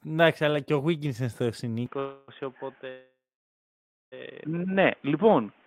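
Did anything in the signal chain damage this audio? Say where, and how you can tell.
Yes. From 1.86 s, right after "στο συν", the sound turns dull with no gap: nothing above 3.6 kHz, level down about 5 dB, and a new noise floor roughly 35 dB below the signal. That points to an input switched to a poorer device at the capture stage. A spectrogram shows the upper band ending abruptly there.

Two call audio freezes, likely from network jitter draining the receive buffer. At 1.99–2.30 s the last sound is stretched into a fading fill for 285 ms. At 2.90–4.14 s the fill lasts 1.22 s, with about 930 ms of silence. Nothing is lost: the speech resumes where it stopped, later than before. On a waveform these appear as decaying smears and a flat stretch, and on a spectrogram as horizontal streaks.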